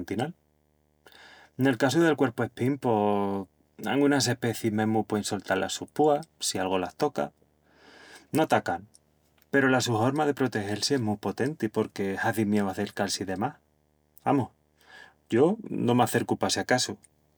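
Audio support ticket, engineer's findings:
Video or display buzz throughout. Screen or video cable coupling into the audio path. Buzz at 75 Hz, the picture's field rate, with hash riding above it, sitting well below the speech at roughly 45 dB down. Check display routing and cable proximity.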